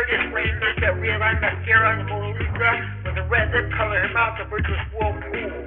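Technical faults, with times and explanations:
Throughout, aliasing: high content has turned gritty and metallic, with harsh, unrelated tones that don't track the sound's real pitch, and the spectrum runs hard up to a sharp edge at 3 kHz. That fits a drop to a 6 kHz sample rate with no filter first, so everything above 3 kHz folded back down as false frequencies, sitting only a few decibels below the genuine sound.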